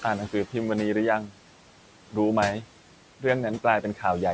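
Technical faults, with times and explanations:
Throughout, noise suppressor artifacts: the room noise, about 18 dB below the speech, is pulled down by about 12 dB wherever the suppressor judges a frame to be noise alone, then let back up when speech returns, so the background seems to sink in the pauses and rise under each phrase. On a spectrogram the broadband noise floor darkens in the gaps and brightens behind the speech; on the waveform the quiet stretches sit visibly lower than the hiss riding under voiced sections.
3.82 to 4.03 s, speech cut by the noise suppressor: near the end, a soft stretch of speech was mistaken for background and turned down along with it, dropping by as much as about 10 dB over roughly a tenth of a second in total. It sounds faint and swallowed rather than cleanly spoken. The waveform envelope shows a sudden dip well below the surrounding speech level, and on a spectrogram that speech energy fades toward the suppressed noise floor instead of standing clear of it.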